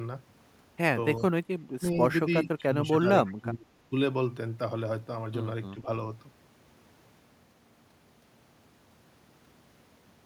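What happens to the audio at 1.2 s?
Around 1.2 s an echo leak and speech suppressed in double talk overlap. From 1.17 to 1.25 s a faint delayed copy of the sound returns, trailing the original by 332 ms and sitting around 30 dB below it. The likely cause is a loudspeaker on the far end whose echo canceller let some of its microphone pickup through and sent it back. On a spectrogram it shows as a weak, smeared duplicate of earlier energy patterns, shifted right by about a third of a second. In the waveform it is only a low-level ripple riding under the main signal.

Between 1.2 and 1.33 s the speech itself dips, falling by around 20 dB at its deepest, for roughly 50 ms in total, in broken patches. It sounds clipped out or briefly muffled. This likely comes from an echo canceller that could not separate the talker from the returning echo while both were active, so it turned everything down. 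The waveform envelope shows abrupt notches. On a spectrogram these appear as short vertical gaps.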